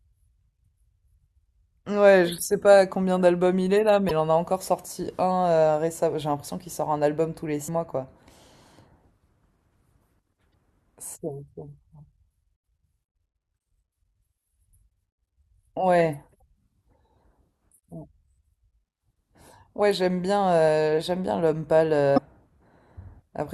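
Short glitches cut into the speech at 4.07–4.11 s, 7.67 s, 10.50–10.53 s, 16.38–16.42 s and 22.14–22.18 s. Each is damaged data in a compressed stream: corrupted bytes make the decoder misread frames and lose sync until it finds the next frame header.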